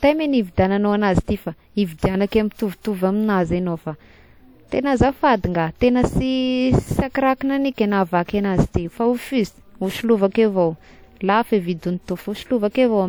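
Low-bitrate audio saved at a high bitrate runs throughout the speech. Nothing is present above 20.2 kHz, and the artefacts of an earlier lossy pass persist. This fits a 64 kbit/s WMA source, likely re-encoded as roughly 244 kbit/s MP3, which cannot restore what was discarded.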